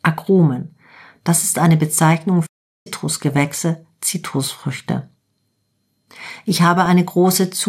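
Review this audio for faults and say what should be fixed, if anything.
The speech cuts out to silence from 2.46 to 2.87 s, a gap of about 0.39 s, before resuming. This playback stall was likely caused by the player running out of buffered data or its thread being blocked. A larger playback buffer and a non-blocking audio thread would prevent it.

From 3.33 to 3.37 s there is a brief burst of noise blips over the speech. This DAB burbling comes from bit errors slipping past error correction into a handful of MP2 frames at a low error rate, putting short blips of noise into single sub-bands. Better reception or error concealment would prevent it.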